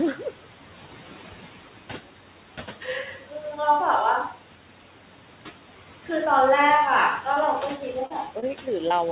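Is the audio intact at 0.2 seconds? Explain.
No. Noise suppressor artifacts are present at 0.2 s, as they are throughout the clip. The suppressor estimates which frequency bands hold steady background noise and turns those bands down frame by frame, here by about 11 dB. The room noise, sitting about 16 dB below the speech, therefore drops away in the gaps between words and comes back up beneath them, so the background audibly pumps with the speech rather than staying constant.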